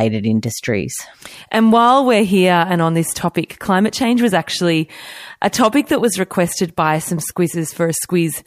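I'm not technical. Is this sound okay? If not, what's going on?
Yes, I can't hear any technical problem in this speech recording. There's nothing here that needs fixing.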